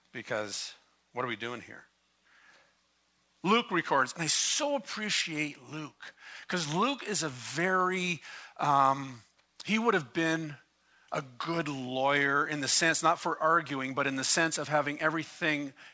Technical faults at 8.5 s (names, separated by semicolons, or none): none